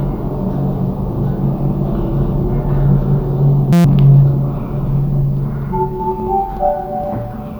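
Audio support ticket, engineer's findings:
System hang loop at 3.73 to 3.84 s: the audio freezes into a steady buzz at about 172 Hz, roughly a tenth of a second of real material gone. Probable component: driver or host stalling while the output device kept replaying its ring buffer. A 5.8 ms slice repeats 20 times, which fits a 256-sample buffer. The loop is short enough to fuse into a tone rather than a stutter.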